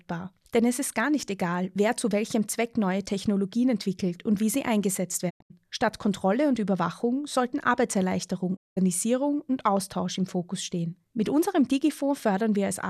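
Speech with digital broadcast dropouts at 5.29 s, after "und wie sie eingesetzt", and 8.55 s. The receiver mutes failed frames with 20 ms fades to silence rather than smeared concealment.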